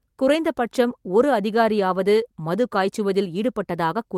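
No technical faults can be heard anywhere in this speech recording. There is nothing to time, measure or explain.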